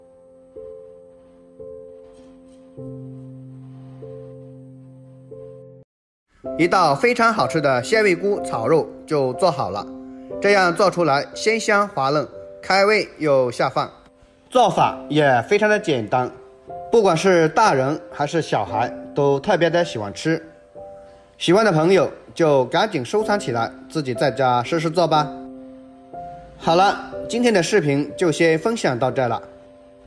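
No faults detected anywhere in the clip.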